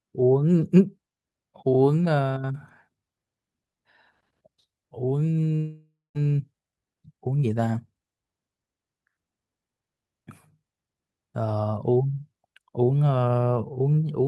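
From 5.55 to 6.17 s the sound smears into a fading buzz, then 0.2 s of silence, likely a long network dropout that lost 400 ms of audio. From 6.25 to 7.59 s the audio sounds hurried but keeps its pitch, running 12% fast. This is a jitter buffer speed-up, which clips out pitch periods to shed about 150 ms of built-up delay.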